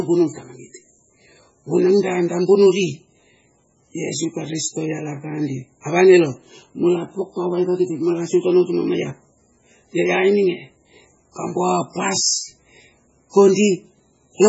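From start to finish the speech carries heavy damage, likely from MP3 compression at a very low bitrate, with the amount of loss fitting something near 16 kbps. Nothing survives above 7.7 kHz, and weaker frequency components flicker in and out between frames, giving a watery, swirling texture with metallic chirps on s sounds and smeared consonant attacks. That flicker separates it from a simple low-pass filter, which would sound dull but stay steady.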